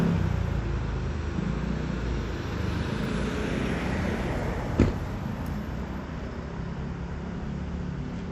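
Throughout the clip the audio has likely passed through MP2 compression at a low bitrate, one that fits roughly 80 kbps. Starved of bits, the encoder's sub-bands are coarsely quantised and its upper bands are cut, so nothing remains above 15 kHz. The damage is plainly audible from start to finish: the sound is dulled and carries a granular, gurgling roughness, the familiar texture of low-rate digital radio.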